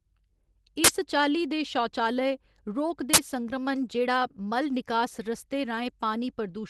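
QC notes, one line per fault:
0.84–0.89 s and 3.14–3.18 s, uninitialised buffer: twice, playback read a buffer before audio was written to it, so leftover memory played as samples. Each is a sudden, loud 43 ms digital noise burst, fitting a 2048-sample buffer. The first comes just before "चाल्ली दे शौचालय रोग", the second just after.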